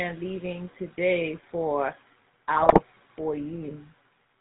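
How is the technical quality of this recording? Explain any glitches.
The recording quality is poor, limited throughout by a low-rate phone codec and broken up once by a burst of transmission damage.

Throughout the clip, the GSM full-rate codec is plainly audible. Its character fits the 13 kbps full-rate scheme, which models the vocal tract as a filter and drives it with a coarse, regularly spaced pulse excitation that keeps only a fraction of the original detail. The band stops at 4 kHz, so the speech sounds muffled, and the rebuilt excitation gives it a buzzy, gravelly roughness.

From 2.56 to 2.81 s there are GSM bit errors. Corrupted bits reached the decoder and scrambled the filter, pitch and gain values it uses to rebuild each frame. The damage spans roughly a dozen consecutive frames, and the error rate was about 3.25% during that stretch. Here the speech collapses into squawks, pops and gargling distortion, with abrupt level jumps and spectral warping.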